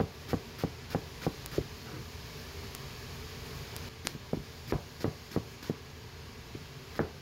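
Single sharp ticks at 1.46, 2.75 and 3.77 s are bit error spikes, where one flipped bit briefly throws a sample far off before it snaps back. At 3.89 s a tick, a mute of a few milliseconds and a sudden jump in the sound mark a CD skip, the laser leaping to another turn of the disc's spiral. Another bit error spike at 4.07 s spans three consecutive samples.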